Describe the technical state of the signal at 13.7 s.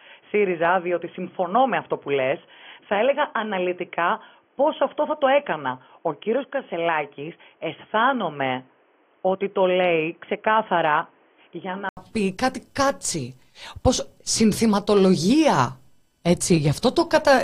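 At 13.7 s the signal is intact, with no audible fault at that moment.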